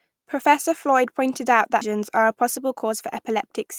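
A skip ahead occurs at 1.81 to 1.83 s: roughly 0.7 s of speech was discarded while later audio was already queued, likely from an overflowing jitter buffer. Nothing fills the gap, so playback lurches forward and the speech on either side joins abruptly.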